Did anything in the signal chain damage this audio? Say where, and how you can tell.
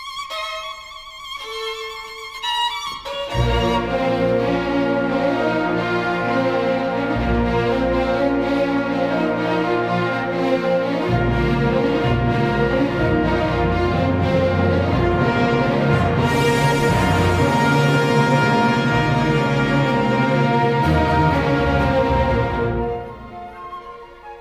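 No, nothing in the signal chain damaged this audio that I can hear anywhere in it.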